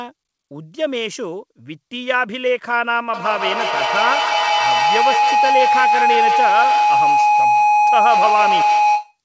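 From 3.14 s to 9.18 s a feedback howl builds under the speech: a loop from microphone to loudspeaker and back adds gain on each pass, so the repeats grow instead of decaying and collapse onto the frequency the loop favours, here around 1 kHz. The tone pulses roughly every 150 ms, the loop's round-trip delay, and peaks at about 3 dB above the speech. The audio stops at 8 kHz, consistent with a wideband call codec.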